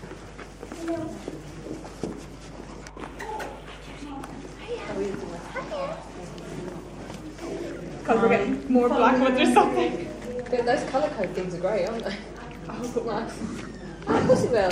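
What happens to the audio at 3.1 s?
At 3.1 s the audio carries mains hum, present throughout the clip rather than starting there. A ground loop or nearby transformer leaks the 50 Hz power line into the signal, giving a steady low drone fairly prominent against the sound, around 20 dB down. On a spectrogram it shows as an unbroken horizontal line at 50 Hz with fainter harmonics above.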